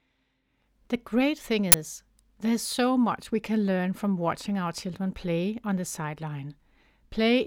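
At 1.72 to 1.74 s, just after "great thing", an uninitialised buffer plays stale memory as sound: a loud burst of digital noise, fitting a 20 ms block, unlike a silent dropout.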